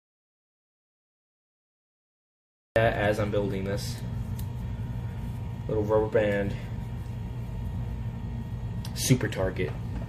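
An audio dropout to silence runs from the start to 2.76 s. The clip opens in silence with no room tone, and the sound enters mid-flow. The input was likely lost through a disconnected device, failed link or stray mute while recording kept writing silence.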